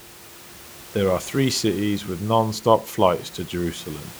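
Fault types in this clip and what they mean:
No technical faults are present.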